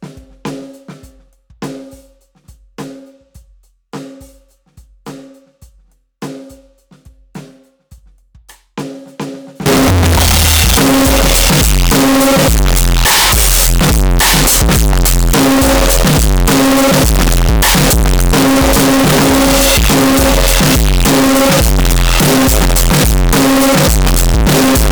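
From 9.66 s to the end, the music turns into a loud, harsh, near-square buzz sitting at an almost fixed, high level, with background noise as loud as the music. Pitch still comes through. It's a float read as integer fault, likely 32-bit float samples read as 32-bit integers.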